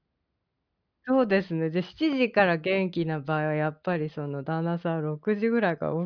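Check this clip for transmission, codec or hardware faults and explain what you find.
No faults detected in this clip.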